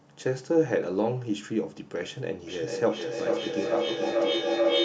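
A speech clip where feedback howl takes over from 2.47 s and runs to the end. Sound from a loudspeaker is being picked up again by a microphone in the same room, and each pass round that loop comes back stronger, so the repeats swell into a tone near 500 Hz that pulses about every 400 ms, at the loop's delay. It peaks about 2 dB above the speech. A spectrogram shows a bright horizontal band near 500 Hz, and the waveform shows a rising, throbbing envelope.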